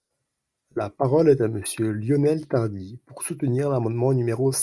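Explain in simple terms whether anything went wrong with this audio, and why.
No technical faults are audible anywhere in this speech recording, so there is nothing to flag.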